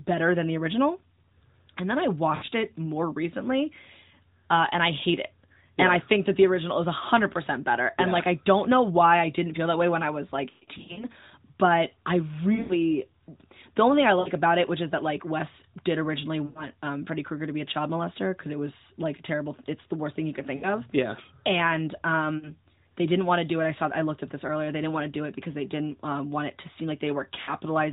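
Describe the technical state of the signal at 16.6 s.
At 16.6 s the signal is inside a run of lost AMR speech frames spanning 16.46 to 16.66 s, about 100 ms of missing audio, which fits five 20 ms frames. Failing their checksums, these frames are concealed by the decoder, which repeats the last good pitch and vocal tract parameters at steadily falling gain. The sound smears into a drawn-out, fading tone, and the voice resumes weak and rough, still band-limited below 4 kHz by the narrowband codec.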